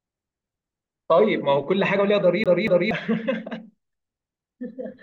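A scratched disc is throwing the player's laser back one track on each turn, so this speech clip sticks at 2.44 s: a 236 ms slice plays twice, with a brief mute at each jump, producing the quick, even stutter of a CD stuck on one turn until 2.91 s.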